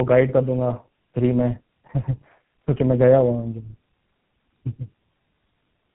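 Tandem speech coding runs through the whole clip. The speech passed through an iLBC link at 15.2 kbit/s, then a G.711 A-law leg at 64 kbit/s, and finally GSM full rate at 13 kbit/s. At each border it was decoded and re-encoded, so two low-rate speech coders stack their errors, with GSM modelling iLBC's already damaged output. The result is rough, muffled and warbly, with nothing above 3.8 kHz.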